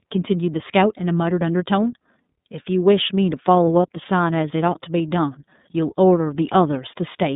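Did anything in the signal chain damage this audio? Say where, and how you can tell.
Yes, the iLBC codec damaged it throughout the speech. Nothing passes above 3.8 kHz, and the line band runs roughly 150 Hz to 3.7 kHz. The speech sounds rough and synthetic, which fits iLBC coding each 30 ms frame's excitation independently, likely at 13.33 kbps.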